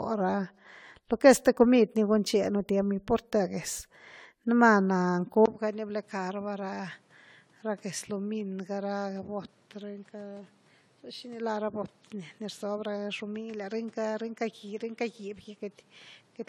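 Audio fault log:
throughout: generation loss. The speech sounds swirly, smeared and hollow, with blurred attacks, more than one pass at a rate fitting 96 kbit/s AAC would cause, likely from around seven re-encodings. A spectrogram shows flickering spectral holes and softened onsets, with nothing above 20 kHz.
5.46 s to end: input switched to a poorer device. After a 20 ms silence the sound turns duller and drops about 10 dB, likely a lower-grade microphone. The waveform visibly shrinks; the spectrogram cuts off at 12.4 kHz and adds a noise floor about 30 dB down.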